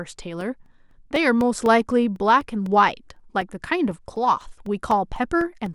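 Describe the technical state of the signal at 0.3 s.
At 0.3 s the speech sits inside periodic USB or driver dropouts running from 0.16 to 5.66 s: every 0.25 s a couple of milliseconds are silenced, heard as regular ticks.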